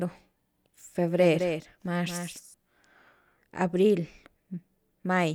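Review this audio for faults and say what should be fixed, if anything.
From 1.18 to 2.54 s, the speech has a doubled audio track. A dry, somewhat quieter copy trails about a fifth of a second behind and cuts in and out abruptly, likely because a second, slower capture path was mixed in. To prevent it, route each source through a single capture path and check that no duplicate input or overlapping edit is left in the mix.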